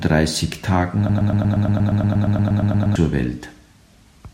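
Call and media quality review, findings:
Broken-record loop, 1.09 to 2.96 s. Speech stops advancing and a single 118 ms fragment repeats exactly, back to back, 16 times, giving a rapid stutter for nearly 2 s. Likely cause: player or decoder stall, with the output re-sending the last buffered fragment until fresh data arrived. The speech that belonged in that span is missing; the sound resumes after the gap rather than picking up where it froze.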